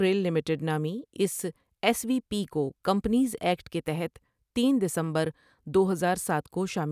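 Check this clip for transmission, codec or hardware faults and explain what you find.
Nothing turned up here: listening through the speech, I couldn't hear a single fault anywhere.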